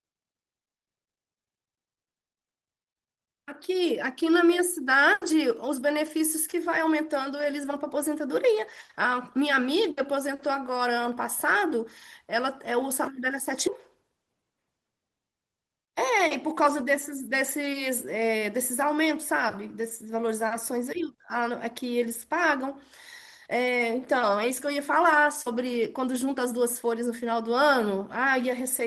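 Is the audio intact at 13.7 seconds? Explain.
No. At about 13.67 to 13.69 s there is a skip ahead in the speech. Around 0.4 s of audio is missing, and the join has no fill. Playback jumps straight from the sound before the cut to sound that was already queued behind it. The likely cause is a jitter buffer that overflowed and discarded the backlog, or audio lost in transit, which pulls the delay in by roughly the same amount. To a listener the speech lurches forward with an abrupt, gapless splice.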